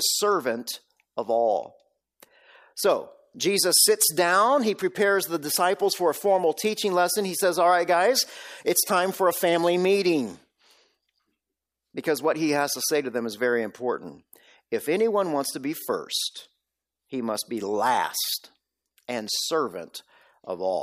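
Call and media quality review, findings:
No audible faults found in this speech recording.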